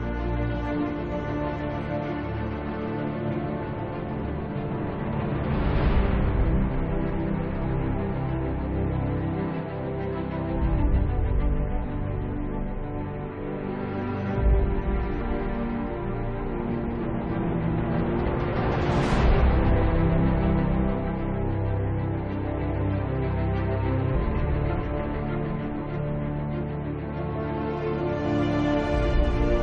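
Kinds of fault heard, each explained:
Compressed frames skipped: at 15.2 s the audio leaps ahead about a fifth of a second, which fits roughly ten missing 23.2 ms frames. Overlapping frames smear the join into a brief blip, seen as a thin vertical seam on a spectrogram and a soft waveform discontinuity.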